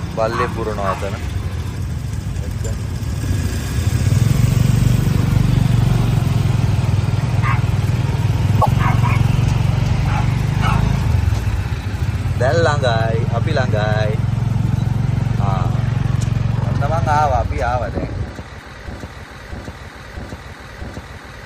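At 8.61 s the audio jumps forward, and the next 70 ms, from 8.61 to 8.68 s, comes out corrupted. The likely cause is a broken MP3 bit reservoir. Frames were lost, and the frame after the cut reached back into bytes that belonged to a different frame. The damaged stretch spans under three frames of about 26 ms. Unlike a plain dropout, the sound resumes further ahead instead of picking up where it stopped.

From 18.88 s to the end, a 0.65 s fragment plays four times back to back, each repeat identical, and the audio never moves on. This is likely a broken-record loop: the stream stalled and kept re-sending the last piece it held, so whatever should have followed is gone. An echo or stutter would fade or vary between passes, while these repeats stay exact and continuous until the clip ends.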